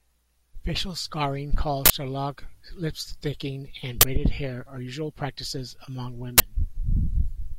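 Three times during the speech, the playback chain sent out a block before any audio had been written into it, so whatever stale data sat in that memory was played as if it were samples. The result is an uninitialised buffer burst: a brief, loud blast of digital noise. It strikes at 1.86 to 1.90 s, lasting about 43 ms, which fits a 2048-sample block, then at 4.01 to 4.03 s and 6.38 to 6.40 s, each about 21 ms, which fits a 1024-sample block.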